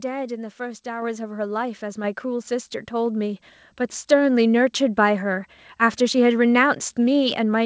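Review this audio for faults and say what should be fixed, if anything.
At 1.02 s the microphone volume is stepped up. The voice and the background rise together by about 4 dB in a single jump. The call software judged the input too quiet and raised the device's input volume in one move. The audio also passes through a call path that leaves nothing above 8 kHz, which fits a wideband codec such as G.722. To prevent the jump, disable automatic microphone gain control and set the input level manually before the call.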